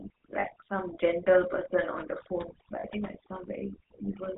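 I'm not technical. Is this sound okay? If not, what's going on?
No. Three things are wrong with this speech.

The background has dropped and breaks up into twinkling specks. That is overdone noise removal: a clean-up tool set too strong, cutting away the background noise along with the quieter parts of the voice.

Throughout, the voice has a buzzy, gravelly roughness and sounds muffled, with no crispness at the top. That comes from the GSM full-rate codec, the old mobile-phone format. It rebuilds the voice from a simplified model and drops everything above 4 kHz.

Twice the sound briefly freezes into a rough, metallic ring, from 0.40 to 0.56 s and from 2.80 to 2.85 s. These are lost GSM frames. About 40 ms of audio went missing each time, and the decoder filled the gap by repeating the last good piece.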